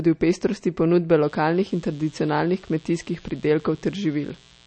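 From the start, the speech carries plainly audible codec damage, likely from MP3 compression. Nothing survives above 8.4 kHz. Weak frequency detail flickers between frames, giving a watery, swirly quality. The loss points to a low bitrate, near 37 kbps.

At 1.24 s a mains buzz begins and runs to the end. It is built on 60 Hz. Switching spikes twice per cycle spread harmonics well up the spectrum. It sits roughly 30 dB below the speech as a continuous buzz.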